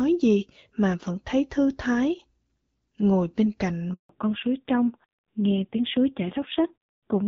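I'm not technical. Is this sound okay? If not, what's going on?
No. A handover gap at 3.93 to 4.09 s: the phone switched networks, and for about 0.16 s no speech got through, so the voice drops out briefly.

A fallback to narrowband follows from 4.09 s to the end: the call slipped from HD Voice to an older, cruder phone codec, so everything above 4 kHz disappears and the voice sounds duller and rougher.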